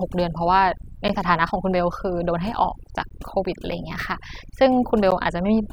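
Throughout, the speech sits over a near-silent background with twinkling specks: overdone noise removal, with bands near the noise estimate pushed down along with quieter parts of the voice. Short, hard-edged holes of about 12 ms fall at 1.08, 3.09 and 5.11 s, a gap between chunks, with silence inserted at each 2 s join.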